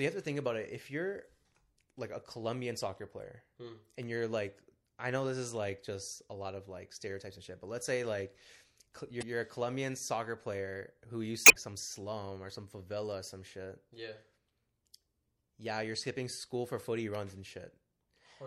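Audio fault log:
Throughout: MP3 compression. The speech has a watery, swirling quality, with sibilants breaking into metallic chirps. Consonant onsets sound smeared rather than crisp. This is likely an MP3 encode starved of bits, and the damage is consistent with a rate around 64 kbps. The encoder discards weak spectral lines, which flicker in and out between frames and produce the swirl.
4.82–4.85 s, 9.19–9.23 s, 11.43–11.56 s: damaged data in a compressed stream. Each of these three spots produces a brief squawk or blip. The last one, at about 120 ms, is the longest. Corrupted bytes in the encoded stream make the decoder misread or reject those frames. It loses sync and hunts for the next valid frame header, so a short stretch comes out as garbage.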